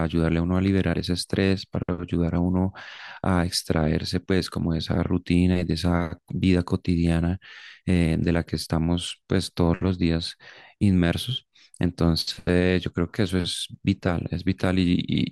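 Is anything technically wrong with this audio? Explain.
No, the signal holds steady throughout this speech recording, with no audible technical faults anywhere in it.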